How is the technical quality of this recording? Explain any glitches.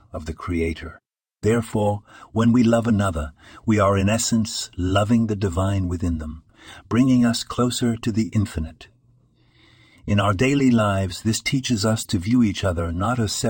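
Two brief glitches interrupt the speech. Corrupt frame decoded, at 7.79 to 7.82 s between "within them bringing us" and "to the infinite", and at 12.02 to 12.06 s between "lives this teaches us" and "to view". Damaged compressed frames were played anyway, so misread data placed energy at wrong frequencies. Each produces a short glitch, peaking around -20 dBFS. The first fits a few consecutive bad frames and the second a single one.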